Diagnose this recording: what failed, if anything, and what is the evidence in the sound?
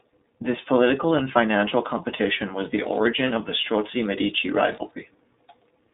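The speech passed through the iLBC codec, a narrowband VoIP coder that encodes each frame's excitation independently. Nothing above 3.8 kHz survives, the line band sits at 200 Hz to 3.7 kHz, and a plainly audible rough, synthetic texture persists throughout, consistent with 30 ms frames at 13.33 kbps.

In the analogue wiring, the computer's load changes modulated the shared ground. From 1.72 s, just after "political and", to 4.91 s, computer activity noise appears as a buzzing pulse train at around 100 Hz, roughly 30 dB below the speech, which tracks machine activity rather than the speech.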